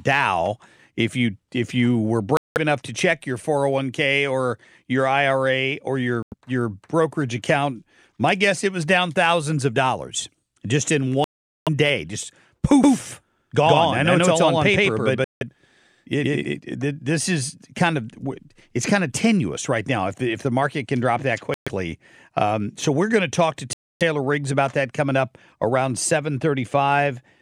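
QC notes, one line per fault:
2.37, 6.23, 11.24, 15.24, 21.54 and 23.73 s, Bluetooth stall: the sound drops to silence for 189, 91, 425, 168, 125 and 276 ms, then resumes. The first follows "you if you were" and resumes at "enough to check your"; the third follows "of dollars just in". The likely cause is interference delaying packets until the headphone buffer empties.
12.83–16.60 s, doubled audio track: starting after "day just" and ending before "it this is kind", a second full-band copy at about the same level trails roughly 150 ms behind. It has no decay, and it starts and stops abruptly. It likely comes from a second, slower capture path.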